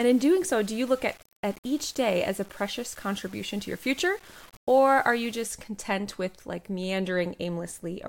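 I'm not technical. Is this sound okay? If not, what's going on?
No. From the start to about 5.45 s, just before "content with like", the speech has a grainy, gritty edge that shifts with the sound. This is low bit depth without dither, likely from rounding to about 7 bits, so quiet detail becomes coarse steps.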